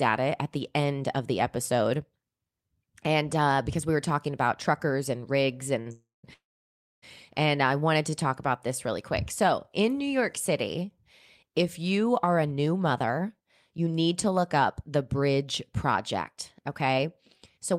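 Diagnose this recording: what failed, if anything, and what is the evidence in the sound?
Short stall from a late packet at 5.81 to 5.88 s, a network and jitter-buffer fault: one packet arrived late, the buffer ran dry, and the receiver stretched the last sound by 44 ms before resuming at the same point. Nothing is lost.

Call audio freeze at 5.92 to 6.25 s and 6.33 to 7.04 s: the speech holds as a fading buzz, then falls silent for 180 ms and 620 ms. It resumes where it stopped, adding 316 ms and 690 ms of delay. The likely cause is network packets held up in transit.

Jitter buffer speed-up at 12.31 to 15.44 s (108% speed) and 15.92 to 17.06 s (106%): the receiver trimmed repeated pitch-period slices to drain the built-up delay. It removed roughly a third of a second, then about 70 ms more. The speech sounds hurried at unchanged pitch.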